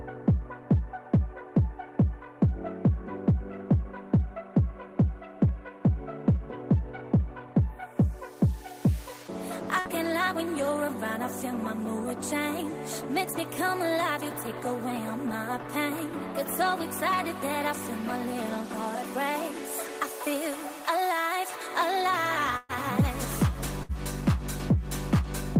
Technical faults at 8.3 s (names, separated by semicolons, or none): none